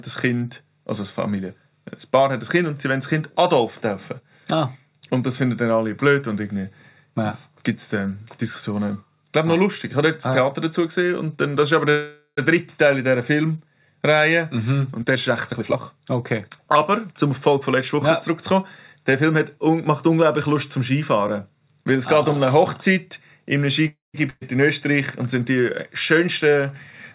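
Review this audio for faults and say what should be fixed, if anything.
There are two call audio freezes, at 11.90–12.39 s and 23.87–24.16 s. The last sound stretches into a fading buzz or hiss for about 0.47 s and 0.27 s, dropping to near-silence at the end, before the audio carries on with nothing lost. That's likely packets stalling in transit and the jitter buffer running dry. A larger or adaptive jitter buffer target would ride these out.

From 14.99 to 17.49 s the jitter buffer speed-up kicks in. The receiver trims small pitch-period slices to shed roughly half a second of built-up delay, so the audio plays at about 118% speed at the same pitch and sounds rushed. Smoother delay adaptation, spread over a longer stretch, would make the catch-up less obvious.

A burst of packet loss follows at 24.30–24.43 s. About 113 ms is filled with a fading continuation of the previous sound, then the audio jumps ahead, with roughly 120 ms genuinely gone. 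Forward error correction or redundancy on the link would cover short losses like this.

Across the whole clip there's nothing above 4 kHz, which fits a 64 kbps G.711 mu-law call path.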